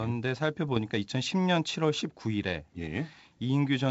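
Bit errors on an ADPCM link appear from 0.69 to 0.79 s, where this G.722 speech at 64 kbit/s breaks into pops and a rough, gritty burst with brief jumps in level. Each flipped bit corrupts a sample and also throws off the decoder's adaptive step size and predictor, so the damage rings on for a few milliseconds before it settles. The short span points to a handful of hit frames at a low error rate, around a tenth of a percent.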